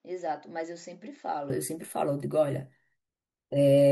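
From 0.0 to 1.5 s, speech sounds dull: spectrogram empty above 7.6 kHz, waveform about 10 dB smaller, likely an input switched to a poorer device.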